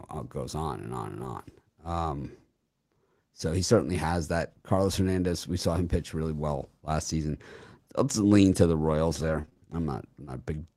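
Around 1.19 to 1.29 s, right after "on and on and", there's a lost packet rebuilt from error correction. Packets went missing, and the decoder played the low-bitrate backup copy carried in the next packet, so there's no gap. The patch runs about 60 ms, which suggests three packets. The same happens at 3.75 to 3.81 s, between "so he" and "has that", and at 6.59 to 6.65 s, between "saw him pitch really" and "last season". Those two are about 40 ms each. Every patch sounds rougher and noisier than the speech around it.

From 9.21 to 9.58 s there's repeated packet loss. Four separate holes hit that stretch. The longest is 24 ms, and about 80 ms are missing in total. Each one gets filled by extending the last bit of sound, roughly a tenth of a second of concealment overall, about 23% of the span. Because the holes come so close together, the sound turns choppy, with small pieces dropped.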